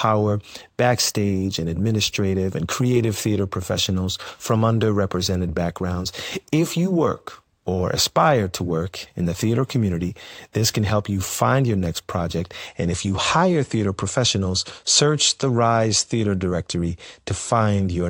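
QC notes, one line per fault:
0.00–12.67 s, imaging from linear upsampling: the top of the speech band is dulled, and a faint metallic shimmer rides on sibilants. A mirrored copy of the spectrum sits between about 11 kHz and 22 kHz, roughly 25 dB below the signal, which fits a source near 22 kHz raised to 44.1 kHz by straight-line interpolation. Unlike aliasing, the extra energy appears above the original band rather than folding down into it.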